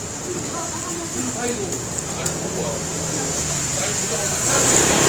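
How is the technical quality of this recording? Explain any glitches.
The recording is marred throughout by plainly audible compression damage. From start to finish the sound comes across rough and grainy, with tonal parts turning noisy rather than clean, yet the top end is not cut away and there is little of the swirling, watery quality of MP3. That points to the likely cause, Opus compression in its CELT music mode at a low bitrate, consistent with roughly 24 kbps. Running short of bits, the encoder keeps each band's energy but refills detail with folded or noise-like content, which produces exactly this texture.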